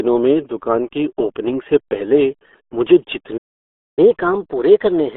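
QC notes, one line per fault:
Throughout: RealAudio 14.4 codec. The speech passes through a narrow telephone-like band, roughly 250 Hz to 3.5 kHz, with nothing at all above 4 kHz, so sibilants and consonant detail vanish and the voice turns muffled and boxy. At 8 kbit/s the coder keeps only a coarse model of the vocal tract and excitation. That heavy loss shows up as a gargly, watery roughness on every syllable.
3.37 to 3.99 s: playback stall. The sound cuts out mid-flow and stays silent for about 0.6 s before carrying on. The likely cause is the player running dry of buffered data, or its output thread being held up, so nothing reached the output until the feed recovered.
3.99 to 5.17 s: catch-up at higher speed. Straight after the gap the speech runs at 1.1 times normal speed until the end, sounding hurried. The pitch rises by about one and a half semitones, giving a slightly thinner, higher voice. 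The player is resampling its backlog to win back the time lost in the stall, and resampling shifts speed and pitch together. The change starts abruptly at the resume point, which marks it as catch-up and not a natural change in delivery.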